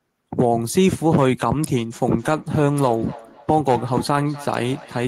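A speech recording where, from 2.18 s through to the end, you get a feedback echo between two devices: each word comes back roughly every 300 ms, peaking at about 19 dB below the speech. That's what happens when a second device in the same room is on the call and plays this talker back out. The mic hears it again, and the echo canceller can't touch it because it only removes its own device's playback.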